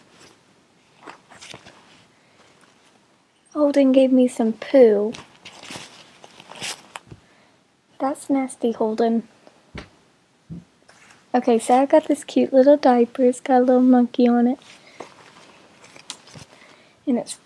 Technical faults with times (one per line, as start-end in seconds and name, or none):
none